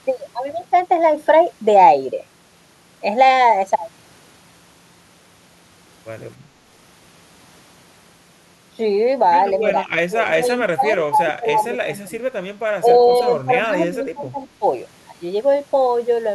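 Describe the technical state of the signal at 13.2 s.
Speech suppressed in double talk runs from 12.79 to 13.28 s, so 13.2 s falls near the end of it. The likely cause is an echo canceller that, with both ends talking at once, could not tell this talker apart from loudspeaker echo and pulled the level down. For about half a second the speech sinks, at its deepest by roughly 15 dB, before recovering just after 13.28 s.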